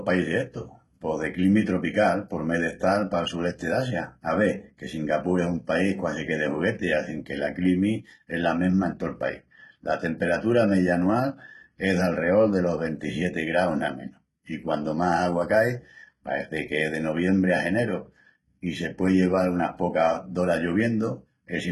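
HE-AAC compression runs throughout the speech, from start to finish. The sound is heavily damaged: nothing reaches above about 11.8 kHz, and the upper band that remains has a synthetic, gritty sheen rather than natural air. The likely cause is HE-AAC coding at a very low bitrate, which fits roughly 16 kbps. Only the lower spectrum is coded properly, and the treble is rebuilt by copying lower bands upward under a coarse envelope. Because the copied harmonics don't align across the crossover, s sounds come out metallic and lispy.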